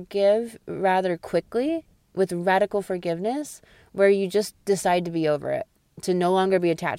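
Listening to the speech recording, nothing stood out as a technical fault at any point.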